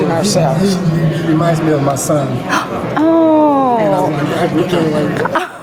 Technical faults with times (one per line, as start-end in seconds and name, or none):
0.00-5.62 gain pumping